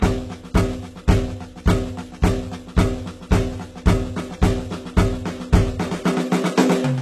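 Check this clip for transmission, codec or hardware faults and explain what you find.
One codec fault runs through the whole music clip. HE-AAC compression is the likely cause: the top octaves sound synthesised rather than captured, with harmonics that fail to line up and plainly audible coding damage. Spectral band replication rebuilds the treble from copied lower bands, and nothing remains above 12.3 kHz. That pattern fits a very low bitrate, around 16 kbps.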